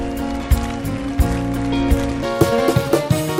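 From 2.23 s to the end, the audio is read two samples at a time (double speed): pairs of samples are consumed as single frames, as if the data held two channels or wider samples. Playback runs twice as fast and 12 semitones higher, a full octave. On a spectrogram the harmonics jump upward and compress in time; the waveform looks squeezed horizontally.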